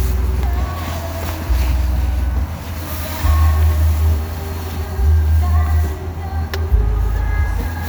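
No technical faults can be heard in this audio.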